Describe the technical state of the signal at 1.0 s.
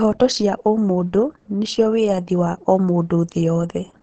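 At 1.0 s the speech carries damage that runs through the whole clip and is most likely Opus compression in its SILK speech mode, at a rate that fits about 16 kbps. The encoder models the voice parametrically within a wideband channel, so nothing sounds above about 8.5 kHz and the voice comes across muffled and hoarse. Unlike MP3 at low rates, it has no swirling or watery holes, and unlike a plain low-pass filter, the voice itself is roughened.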